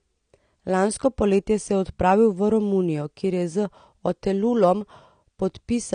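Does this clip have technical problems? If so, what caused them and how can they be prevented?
Yes. The speech carries AAC compression damage from start to finish, plainly audible: nothing is present above 9.7 kHz, so the top end sounds dull, and sibilants and sustained sounds have a smeared, fizzy, warbling texture. This is likely a low-bitrate AAC-LC encode, consistent with something around 32 kbps, where the encoder drops the high band and coarsely quantises the remaining spectrum, leaving gaps it fills imperfectly. To prevent it, encode speech at 96 kbps or more, or keep an uncompressed master.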